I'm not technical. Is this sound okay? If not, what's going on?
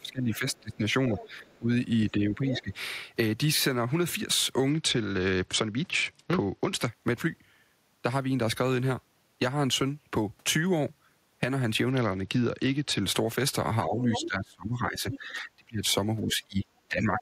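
No. Three kinds of fault can be heard.

Speech suppressed in double talk: from the start to 2.72 s, and again from 13.85 s to the end, the main voice keeps dipping, dulling or dropping out in pieces, for about a second and a half in the first stretch and about three seconds in the second. This is likely the call's echo canceller: when both people talked at once, it could not tell the talker from the echo of the other person, so it turned everything down.

Other side's voice leaking through: a second, fainter voice comes through at 0.35 to 1.57 s, 2.1 to 2.74 s, 14.11 to 14.27 s, 15.11 to 15.19 s and 16.31 s to the end. The early stretch is quite faint, and the later scraps are louder. This is likely the other person's voice playing from the talker's loudspeaker and being picked up again by the microphone, with the echo canceller not removing all of it.

Bluetooth SBC bit pool drop: from 4.70 to 6.88 s and from 11.90 to 13.03 s, the sound loses its brightness and picks up a gritty, rough texture, then clears again. 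Here the wireless Bluetooth link became crowded, and the phone cut the amount of detail it sent so the audio would keep flowing. With less detail, the high frequencies are dropped and the rest is coded more coarsely.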